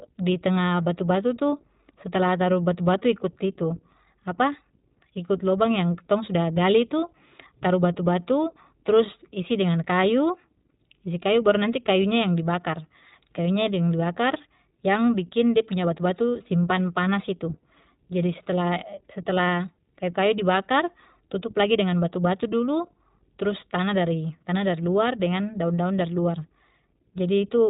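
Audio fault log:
Throughout, iLBC codec: nothing above 4 kHz survives, so the speech sounds narrowband, with a plainly audible rough, synthetic texture. Each short frame, consistent with 20 ms at roughly 15 kbps, is coded on its own without leaning on the one before it.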